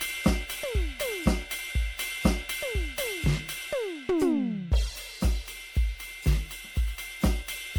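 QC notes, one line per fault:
throughout, generation loss: the music sounds swirly, hollow and smeared, with blurred attacks and nothing above 19.9 kHz, worse than one MP3 pass at about 96 kbit/s would leave. Likely around ten re-encodes, each requantising on a shifted frame grid so the artefacts accumulate.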